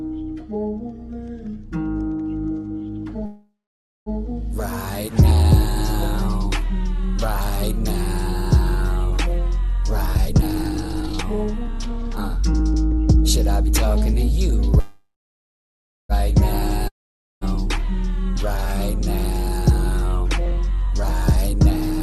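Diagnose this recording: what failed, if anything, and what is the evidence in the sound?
At 3.25 to 4.09 s and again at 14.80 to 16.12 s the sound stalls into a fading buzz, then silence for about 0.55 s and 1.03 s. It resumes exactly where it stopped. This is a call audio freeze at the network and jitter-buffer stage, likely from delayed packets draining the buffer, so a gap is inserted while nothing is lost.

From 10.06 to 14.73 s the audio runs hurried at the same pitch, about 117% speed. From 18.36 to 21.87 s it is only slightly quick, at 103%. This is jitter buffer speed-up: the receiver trims short pitch-period slices repeatedly to shed excess delay, roughly 0.7 s and 0.1 s respectively.

At 16.88 to 17.44 s the sound decays into a brief buzz and then about 0.5 s of silence, and it returns further on with about 0.54 s missing. This is a long network dropout, likely packets lost outright, with concealment filling the hole before giving way to silence.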